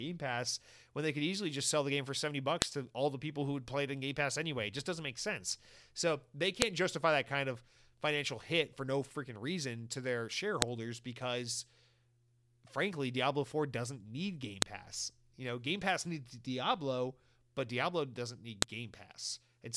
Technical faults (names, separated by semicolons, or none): file header played as audio